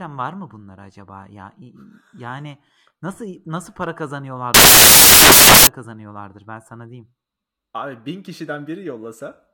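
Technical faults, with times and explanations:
4.54 to 5.67 s, samples built from the wrong bytes: speech turns into loud, harsh broadband noise, since the jumpy low-order bytes end up as the big part of each sample.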